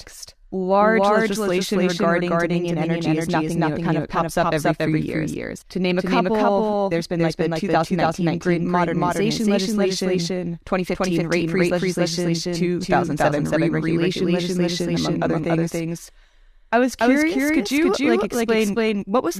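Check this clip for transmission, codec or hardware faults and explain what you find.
Two faults are present: a doubled audio track throughout and a burst of periodic dropouts near the end.

Doubled audio track, throughout the clip: every part of the speech is heard twice, the second copy trailing by roughly 300 ms at about the same loudness as the first. The copy is full-band and dry, with no decay or room colouring, which marks it as a duplicate rather than an echo. This likely comes from the signal being captured again through a slower path and mixed back in, or from an edit that left two copies out of alignment.

Periodic USB or driver dropouts, from 17.89 s to 19.29 s, starting just after "I was curious could": a regular tick occurs about every 0.1 s, around fifteen in all. Each tick comes from a tiny gap, a small fraction of a millisecond, where samples were skipped rather than filled. 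The even spacing indicates a background task that stalls the USB bus or audio driver on a fixed schedule. The ticks are heard only while the speech is sounding.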